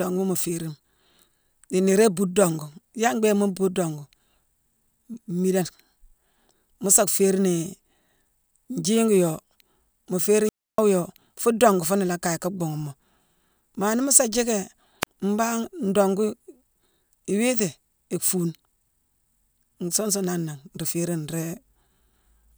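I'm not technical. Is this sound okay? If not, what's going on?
No. The speech has two wireless microphone squelch dropouts. The radio link weakens, hiss rises, and the receiver mutes itself. At 10.43 to 10.81 s there's a gap of about 0.3 s. A much shorter one, about 33 ms, follows "nii mu sa jiicki" near 15.01 s.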